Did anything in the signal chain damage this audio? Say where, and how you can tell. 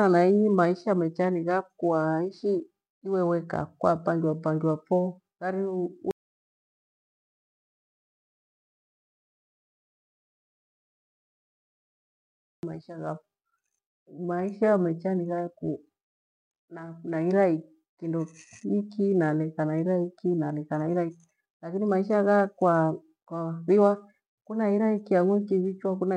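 Yes. There is an audio dropout to silence from 6.11 s to 12.63 s. The speech stops abruptly mid-flow and resumes just as abruptly. The gap lasts about 6.5 s, and it is silent, with no room tone or noise floor underneath. That points to the capture stage. The input was likely lost at the device or its link while the recorder kept writing silence. Whatever was spoken in that stretch is unrecoverable.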